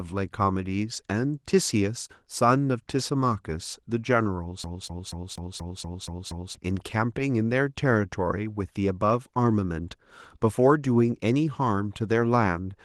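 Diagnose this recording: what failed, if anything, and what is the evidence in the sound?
CD stuck on one turn, 4.64 to 6.55 s, in playback: a 0.24 s slice of speech repeats eight times as the laser jumps back each revolution.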